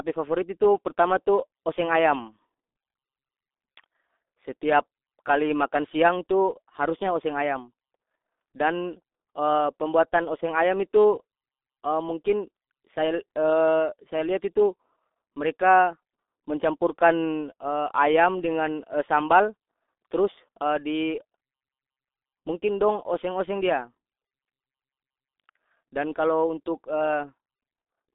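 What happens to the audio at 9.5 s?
At 9.5 s the speech carries the same G.723.1 codec damage heard through the whole clip. Nothing reaches above about 3.8 kHz, and the band sits roughly between 250 Hz and 3.6 kHz, so the sound is muffled and thin. What separates it from a simple band-limited phone line is the heavy hoarseness and smeared consonants, which fit a 6.3 kbit/s coder working in 30 ms frames and updating its voice model too slowly to follow quick changes.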